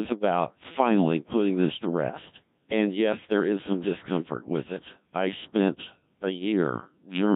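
From start to finish this speech has gone through a Codec 2 vocoder, and it sounds heavily damaged, which fits a very low rate around 1.3 kbit/s. Only pitch, voicing, energy and a rough spectral shape survive, and sine-wave resynthesis leaves it robotic and buzzy.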